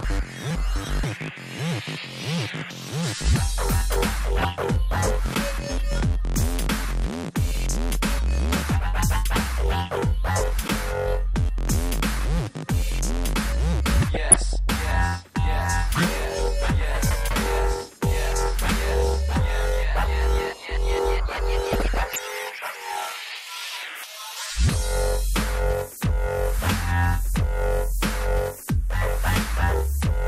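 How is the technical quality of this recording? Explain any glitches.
The recording has audible problems throughout, plus three short bursts of damage.

MP2 compression: the whole clip sounds dull with a gurgly, grainy texture, likely from MPEG Layer II at a low rate, around 80 kbps, starving upper sub-bands of bits.

DAB burbling: at 4.39 to 4.47 s, 14.14 to 14.56 s and 21.73 to 22.18 s, short blips of noise appear in single sub-bands as a small share of bit errors slip past error correction and throw individual sub-bands' levels around.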